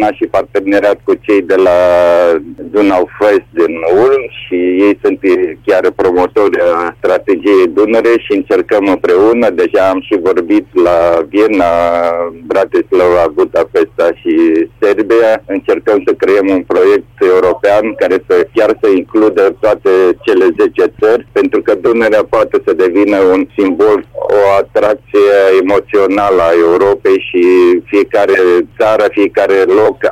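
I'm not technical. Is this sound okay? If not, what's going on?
Yes, this sound is okay. Nothing in it points to a technical problem.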